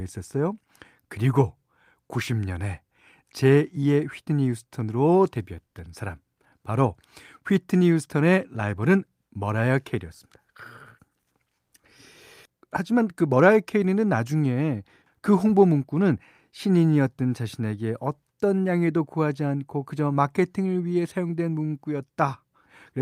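A recording of speech, with no technical fault to report in it. Nothing in the audio calls for a time or a cause to be given.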